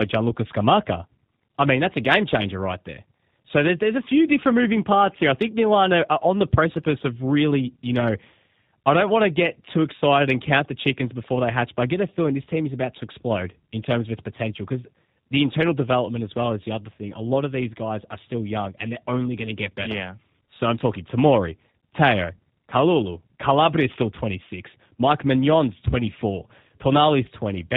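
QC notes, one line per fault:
throughout, G.729 codec damage: the speech has a plainly audible rough, buzzy, slightly synthetic quality. It sounds as if it was rebuilt from a vocal tract filter, a pitch predictor and a few sparse pulses per frame, which fits G.729A at around 8 kbit/s. On a spectrogram, energy stops abruptly at 4 kHz with nothing above. The harmonics look smeared and stepped at 10 ms frame boundaries, and the waveform shows pulse-like, less natural cycle shapes.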